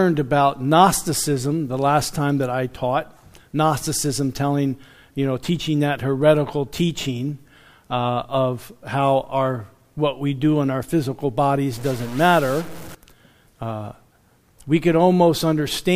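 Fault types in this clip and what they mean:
Stuck bit: from 11.73 to 12.95 s the sound turns harsh and buzzy, likely a jammed data bit knocking samples off by about -30 dBFS.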